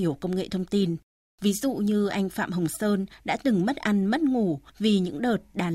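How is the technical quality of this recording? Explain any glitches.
The recording has no glitches to report.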